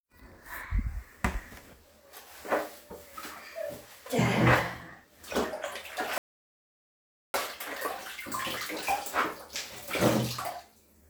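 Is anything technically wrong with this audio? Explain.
Yes. There are two kinds of fault.

At 2.45 s and 8.57 s, audio is missing between chunks. About 20 ms vanishes at each. The sound skips with no silence, likely because a recorder working in 2.5 s chunks dropped audio at the changeover.

From 6.18 s to 7.34 s, a rebuffering stall occurs. Playback starved and halted, so the sound cuts to silence for 1.16 s. It then resumes exactly where it stopped.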